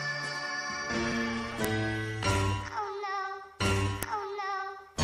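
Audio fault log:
1.65 s and 4.03 s, file header played as audio: a sharp, loud click where a new piece begins, as leftover WAV header bytes play back as samples.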